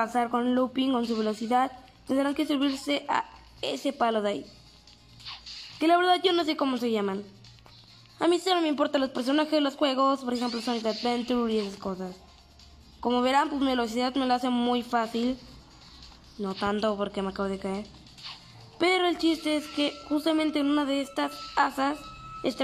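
No technical faults can be heard anywhere in this audio. Nothing in it calls for comment from a fault-finding point of view.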